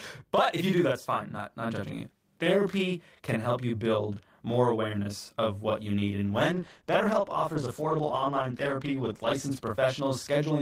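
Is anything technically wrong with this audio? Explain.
Yes. Two faults are audible.

Channel delay (doubling) runs throughout. One channel arrives 40 ms late and is summed to mono. The speech sounds doubled, like a tight slap echo.

A call bitrate drop runs from 6.27 s to 10.45 s. The encoder codes more coarsely, and the speech turns rough and muffled. This fits a fall from 32 to 13 kbps, bottoming out for 3.1 s.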